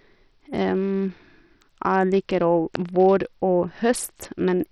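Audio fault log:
Throughout: Bluetooth SBC compression is the likely culprit, with gritty, heavy damage on the speech and nothing above 16.8 kHz, which fits a starved link around 64 kbps.
2.75 s: electrical switching spike, a sharp snap riding over the speech, likely a nearby switch or static discharge arcing into the line.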